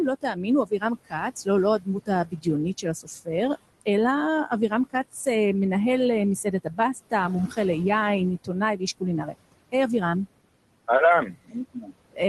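Throughout, the room noise, about 17 dB below the speech, sinks between phrases and swells back under them. These are noise suppressor artifacts: the suppressor turns down the noise bands frame by frame, by up to about 21 dB.

From 0.21 to 1.48 s, 1.79 to 3.29 s, 4.48 to 5.27 s, 6.43 to 7.13 s, 8.44 to 9.74 s and 11.46 to 12.19 s, bits of speech sound swallowed or faint. This is speech cut by the noise suppressor. It took soft speech for noise and pulled it down by about 12 to 21 dB, for brief moments within each stretch.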